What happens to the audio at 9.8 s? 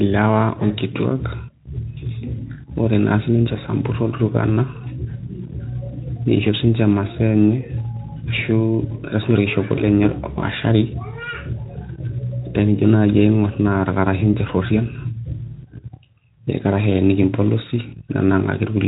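Right after "siinche orkishopo" there's a short dropout from about 9.75 to 9.84 s, and it's VoIP packet loss concealed by the speech codec. The gap sounds like a single 20 ms frame went missing, and the Speex decoder papered over it by carrying its last pitch and filter forward at falling gain. You hear a brief stretched patch, a buzzy tone or a coloured noise that fades, and because each frame builds on the previous one, the sound stays a bit thin for a moment after the stream returns.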